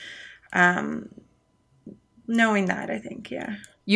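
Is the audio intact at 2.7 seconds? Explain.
Yes, at 2.7 seconds the speech runs intact, with no dropout, click, distortion or other fault to be heard at that moment.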